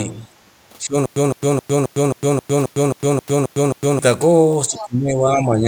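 An echo canceller that likely could not tell the talker from loudspeaker echo while both sides spoke causes speech suppressed in double talk from 0.04 to 0.25 s. The opening sound dips by a few decibels for about a fifth of a second. It happens again from 0.83 to 0.95 s, where the level drops more noticeably, by around 10 dB, for roughly a tenth of a second, so the sound briefly sinks.

From 1.06 to 3.99 s the playback likely stalled and kept retrying, producing a stutter with silent gaps. Each retry replays the same 160 ms fragment and is followed by about 106 ms of digital silence. The burst returns every 267 ms, eleven times in all, in a rigid mechanical rhythm, and whatever should have been heard across those three seconds is lost.

From 4.69 s to the end, speech is again suppressed in double talk, the likely cause once more being an echo canceller ducking the talker while the far side speaks. 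This time the level falls by roughly 15 dB at its deepest across about a second, leaving the sound much quieter.

Within that stretch, from 4.76 to 4.86 s, the other side's voice leaks through. The echo canceller likely left part of the loudspeaker signal in the microphone feed. It comes through as a short scrap sitting well below the main sound, around 15 dB down.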